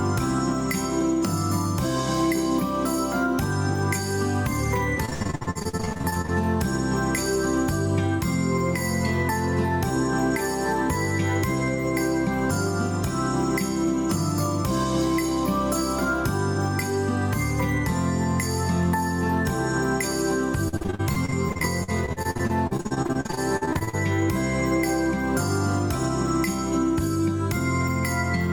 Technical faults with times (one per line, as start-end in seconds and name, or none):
0.00-28.52 gain pumping
5.05-6.30 repeated packet loss (robotic sound)
20.68-23.95 repeated packet loss (robotic sound)